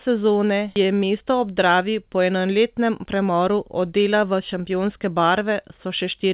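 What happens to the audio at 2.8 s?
Nothing goes wrong at 2.8 s: the speech carries straight through that moment with no dropout, glitch or distortion, just the ordinary narrowband sound of a G.711 call path with nothing above 4 kHz.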